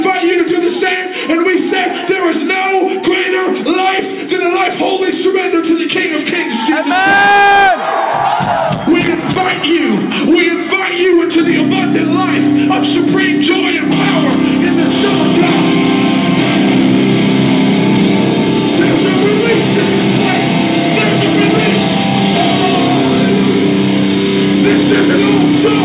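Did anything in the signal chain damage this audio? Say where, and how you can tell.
No, nothing in the signal chain damaged this audio.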